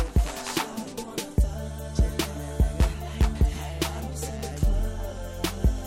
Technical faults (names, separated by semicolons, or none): none